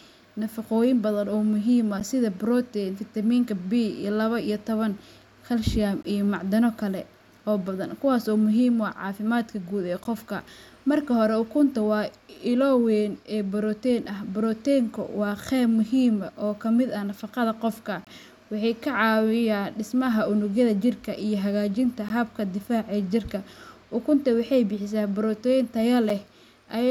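Short, hard-edged dropouts cut the speech at 2.00, 6.03, 10.04, 14.05, 18.05 to 18.07, 22.09 and 26.10 s, roughly every 4 s. This is a gap between stream segments: each 4-second segment boundary leaves 6 to 23 ms of inserted silence, with no speech lost.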